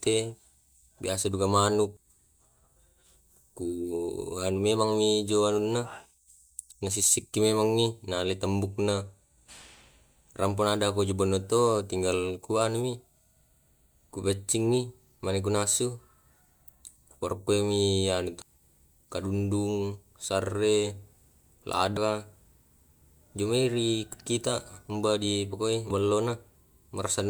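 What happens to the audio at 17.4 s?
Nothing goes wrong at 17.4 s; the speech carries on intact through that moment with no dropout, click or distortion.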